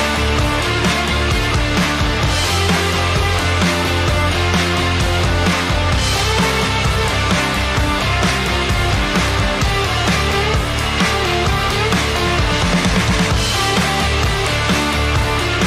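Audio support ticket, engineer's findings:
No audible faults found on review.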